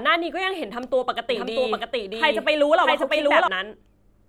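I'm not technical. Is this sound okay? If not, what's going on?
No. From about 1.3 s to 3.48 s there's a doubled audio track: a second copy of the speech runs roughly seven tenths of a second behind, just about as loud, then cuts off abruptly. It's likely caught twice by a slower path or left in by an edit.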